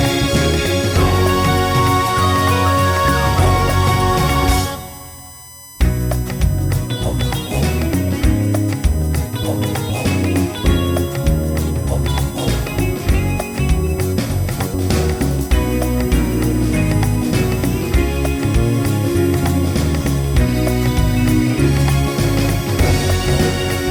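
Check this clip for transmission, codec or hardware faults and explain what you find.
There is one hardware fault, present for the whole clip.

USB whine runs from start to finish. Current drawn by the USB bus in its regular 1 ms frames and 125-microsecond microframes leaks into the audio through the shared power or ground path. It is heard as a steady, fixed-pitch whine with a component at 1 kHz and its strongest energy at 8 kHz, sitting roughly 20 dB below the signal. It is a thin, high-pitched tone laid over the sound throughout.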